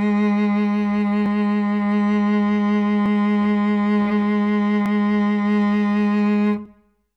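From 1.26 to 6.66 s the music clicks about every 1.79 s. These are clock drift buffer slips, likely two clocks about 400 ppm apart dropping or repeating around 30 samples.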